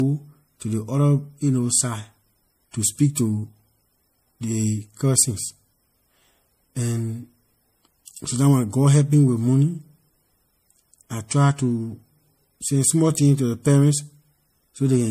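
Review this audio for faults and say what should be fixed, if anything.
Throughout, the speech shows transcoding between lossy codecs: nothing above 15.2 kHz and stacked artefacts, likely from an MP3 encode later re-encoded as AAC. To prevent it, keep a lossless master and encode just once, straight from that source.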